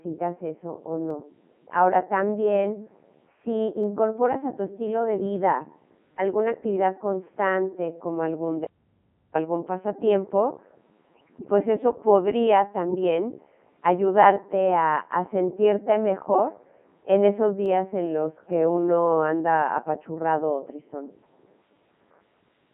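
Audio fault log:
Throughout: Codec 2 vocoder. The speech sounds robotic and buzzy, confined to roughly 150 Hz to 3.5 kHz. At 3.2 kbit/s only pitch, voicing, energy and a spectral envelope survive, and the decoder rebuilds the voice from sine waves, so the original waveform is gone and the damage is heavy.
1.10 s, 3.84 s, 17.66 s: dropped samples. Each is a single sharp click, a thin vertical line across the spectrum. The likely cause is a handful of samples, around four, missing from the stream, so the waveform jumps abruptly to a later value without any audible gap.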